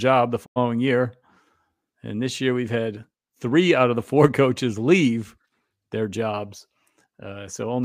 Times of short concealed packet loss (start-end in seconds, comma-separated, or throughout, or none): none